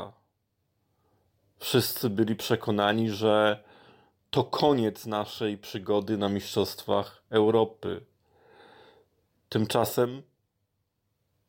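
At 4.37 to 4.39 s, just before "koniec naszej przygody na", a single loud pop, likely a voltage spike, thumps a few decibels above the speech, which continues unbroken underneath, unlike a dropout.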